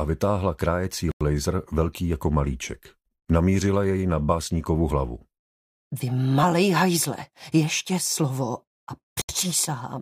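At 1.12 s and again at 9.22 s the sound drops out abruptly, leaving holes of about 93 ms and 73 ms. Each is a block of digital silence, where samples became zeros, likely because the output buffer went unfilled in time. The first hole fits a 4096-sample buffer.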